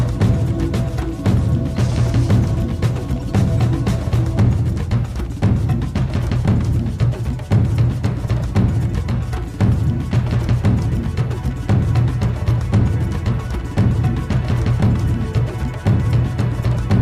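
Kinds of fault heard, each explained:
No technical faults can be heard in this clip. Nothing in the audio calls for a fault-by-fault explanation.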